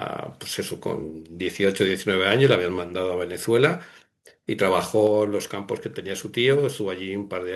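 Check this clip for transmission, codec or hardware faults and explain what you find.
Two hardware-side faults affect the speech: microphone overload on two loud peaks, followed by a single downward step in input level.

Microphone overload, 2.44 to 2.54 s and 3.64 to 3.66 s: the loudest moments push about 2 dB past the converter's limit, likely because the input gain was too high. Their flattened tops give those syllables a brief harsh, crackly edge, with only a small share of samples clipped.

Microphone volume stepped down, 5.07 s: the whole signal, voice and background alike, suddenly drops by about 4 dB. This is likely the call software reacting to the earlier overload by cutting the device's input volume in one step.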